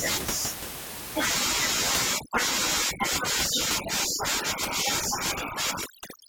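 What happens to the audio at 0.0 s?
Nothing goes wrong at 0.0 s; the audio is intact there, with only the room's own background noise, about 10 dB below the speech, as part of the recording.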